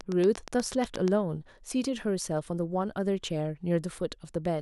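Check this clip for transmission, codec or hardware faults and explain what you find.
From 0.01 to 1.09 s, a regular train of clicks ticks over the speech at about 8.4 per second, roughly ten pulses, standing well above the signal. Likely cause: interference or a struggling interface injecting repeated pulses.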